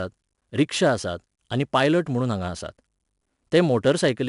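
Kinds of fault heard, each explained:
4-bit ADPCM compression: each sample is stored as a 4-bit step from a prediction, so coding error rides on the speech as gritty hiss that tracks its level. Here it is plainly audible, with nothing above 10.6 kHz, which fits a sample rate near 22 kHz.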